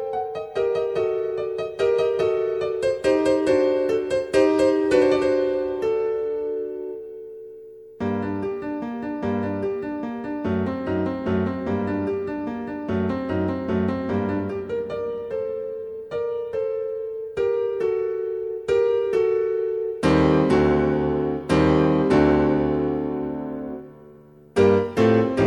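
No technical faults can be heard anywhere in the recording.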